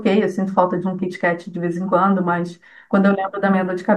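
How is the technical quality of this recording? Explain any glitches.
I hear no technical problems anywhere in this recording.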